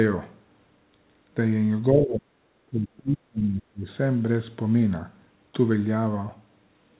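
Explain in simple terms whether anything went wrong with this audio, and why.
The voice dips sharply from 1.91 to 2.3 s, then again from 2.66 to 3.88 s, nearly vanishing in places. That's speech suppressed in double talk, likely from both sides talking at once, so the echo canceller turned this talker down along with the echo.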